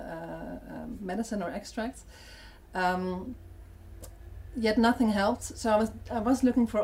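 Nothing here trips any alarms; the sound just rolls along with no technical faults to point to anywhere in the clip.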